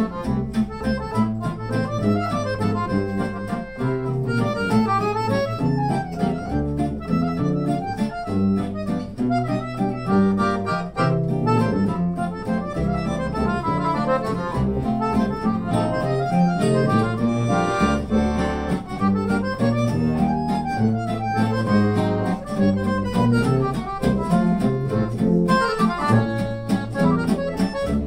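Nothing in this audio stood out as a technical problem on listening.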